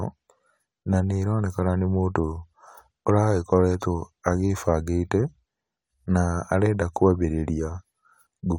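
No technical faults are audible.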